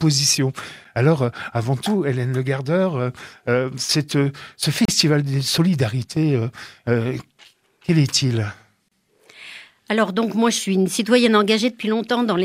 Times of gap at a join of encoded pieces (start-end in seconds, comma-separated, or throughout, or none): 4.85-4.88, 8.88-8.92